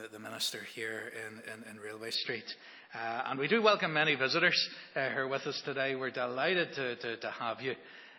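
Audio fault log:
2.15–8.19 s: adaptive stream at a lower bitrate. Quality drops suddenly without a gap, nothing remains above 5.8 kHz, and codec artefacts rise, fitting an MP3 switch from 128 to 24 kbit/s.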